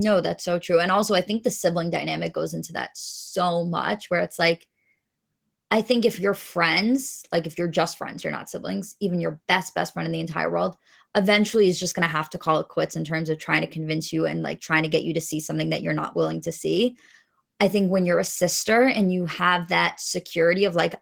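Opus voice compression runs throughout the speech. The coder splits the band: linear prediction handles everything below 8 kHz, and a transform layer covers the top up to full bandwidth. At a rate that sounds like about 16 kbps, with 20 ms frames, the excitation is coded coarsely, so the voice comes out hoarse and faintly robotic. The codec damage is plainly audible.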